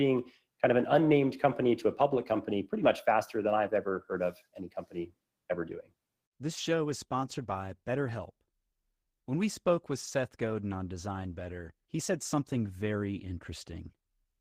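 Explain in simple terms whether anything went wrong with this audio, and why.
Nothing went wrong here: the speech comes across steady and unbroken, with no glitches, dropouts or odd noises anywhere to point to.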